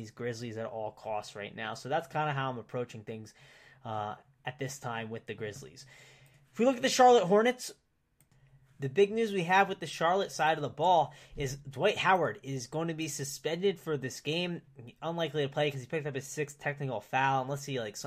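There are no technical faults to describe in this speech recording, so there is nothing to place in time order.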